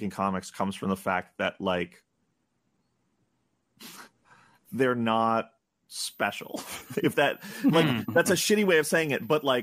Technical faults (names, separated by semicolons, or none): switching supply whistle